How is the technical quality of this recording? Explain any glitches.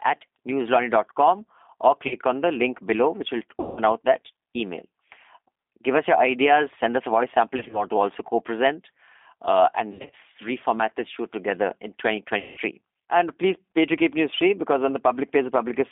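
The quality is fair at best: this is narrowband phone-line speech with codec damage you can plainly hear, plus five patches of packet loss.

The G.729 codec (G.729A at 8 kbit/s) runs the whole way through. It doesn't send the waveform. It sends a vocal tract filter, a pitch predictor and a handful of pulses per frame, and the far end rebuilds the speech from those. Only about 250 Hz to 3.6 kHz survives, so the result sounds thin, with a plainly audible rough, synthetic edge.

The VoIP packet loss concealed by the speech codec shows up five times. Around 2.08 to 2.16 s about 30 ms goes missing, and around 3.60 to 3.79 s a longer 170 ms gap. From 7.57 to 7.85 s, between "us a voice sample" and "to also co present", 80 ms drops out in short bursts of 20 ms or less spread over 160 ms. From 9.92 to 10.14 s, after "co present uh and" and before "reformat this show together", 150 ms is lost across 200 ms, in runs up to 50 ms. 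Finally, at 12.39 to 12.59 s, right after "this show together in", 180 ms is lost. In each case the decoder fills the hole by carrying its last pitch and filter forward at falling gain. That smears the sound into a fading buzzy tone or coloured noise. Because every frame builds on the one before, the speech stays weak or distorted for a moment after the packets come back.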